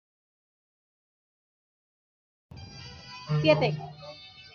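Nothing goes wrong anywhere in this bit of speech, so there's no technical fault to point to at any moment.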